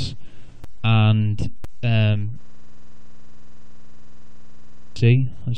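At 0.64 s and again at 1.64 s, a gap between stream segments cuts a hole of about 5 ms into the sound, one second apart. Adjacent segments' timestamps fail to meet, and the player pads the difference with silence. On the waveform each appears as a flat, hard-edged notch, and on the spectrogram as a thin vertical blank stripe.

From 2.43 s to 4.96 s a system hang loop takes over. The machine stalled while the audio hardware kept replaying its ring buffer, repeating one 46.44 ms slice, which fits a 2048-sample buffer, some 55 times. It sounds like a rough buzz at 21.5 Hz. The waveform shows an identical block tiled end to end, and the spectrogram shows evenly spaced vertical repeats.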